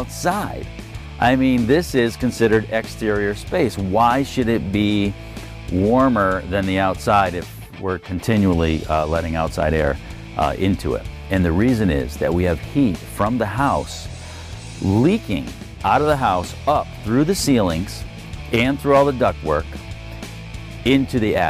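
No technical faults can be heard anywhere in the recording, and the signal stays steady and continuous throughout.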